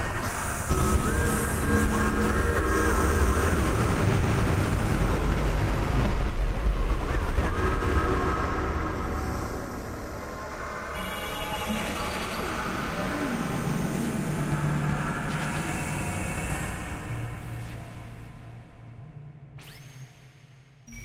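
No technical faults can be heard in this audio.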